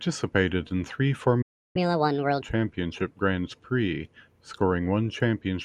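At 1.42 s, just after "in three", the speech cuts to silence for about 0.33 s, until 1.76 s. This is a playback stall: the output stops mid-flow, most likely because the player ran short of buffered data or its audio thread was held up.

From 1.76 s to 2.42 s comes catch-up at higher speed. The player works through its backlog at 1.5 times normal speed by resampling, so tempo and pitch rise together, roughly seven semitones, before dropping back to normal.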